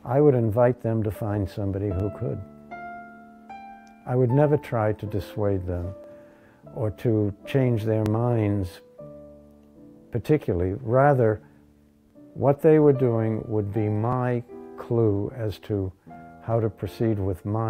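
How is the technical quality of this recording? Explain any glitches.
The recording has one recurring glitch: overlapping chunks. It appears at 2.00, 4.02, 6.04, 8.06, 10.08, 12.10, 14.13 and 16.15 s. The audio was handled in 2.0 s blocks, and each block begins about 21.33 ms before the previous one ended. That slice plays twice at every join. Each repeat is heard as a brief click or stutter, evenly spaced and drifting slightly later each time.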